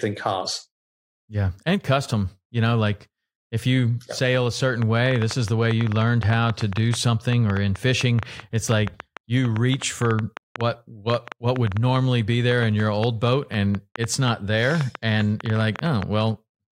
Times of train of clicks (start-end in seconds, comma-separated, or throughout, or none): 4.82-16.03